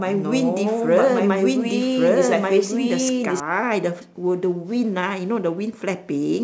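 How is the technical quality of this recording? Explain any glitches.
The recording has one clear fault, a doubled audio track, running from the start to 3.4 s. The speech is heard twice: a second, equally loud copy trails about a second behind, most likely from a slower duplicate capture path. It is dry and full-band, then stops abruptly at 3.4 s. On a spectrogram, each speech pattern repeats one second later; the waveform shows overlapping, denser envelopes.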